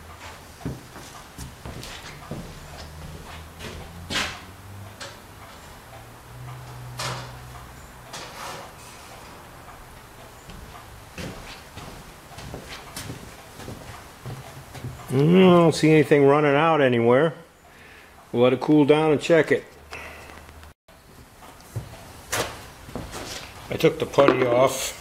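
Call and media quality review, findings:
Train of clicks, 18.66 to 20.50 s: about ten irregular pops, roughly 4.4 per second, peaking level with the sound. Likely interference or a struggling interface injecting pulses. Waveform: sharp isolated spikes. Spectrogram: thin full-band vertical lines, unevenly spaced.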